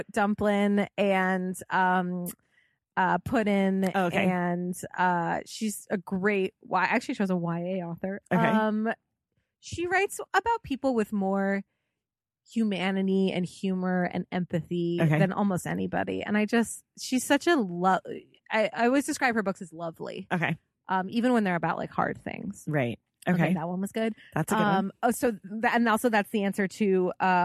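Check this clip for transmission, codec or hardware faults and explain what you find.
I found no faults to explain in the clip.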